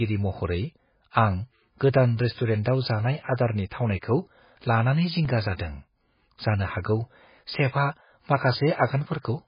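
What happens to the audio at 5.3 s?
At 5.25 s, just after "जानाय आदारनि थावनायखौ लानानै", there is a block of digital silence about 2.7 ms long. The output briefly gets zeros instead of audio, which fits a 128-sample buffer that was not filled in time. The cut is too short to hear as silence. It comes across as a tick or a dip.

Across that moment, and the whole clip, the speech also carries heavy codec damage. It sounds watery and swirly, and there is nothing above 5 kHz. This is likely MP3 compression at a very low bitrate, around 16 kbps, where weak frequency lines flicker on and off.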